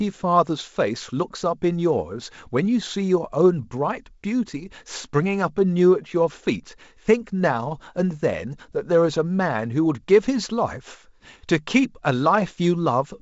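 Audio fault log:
Nothing to log here, just speech carried over G.722 wideband telephone coding at what sounds like 56 kbit/s, with the top end stopping around 7.7 kHz and a light grain from the coding, which is simply how that path sounds.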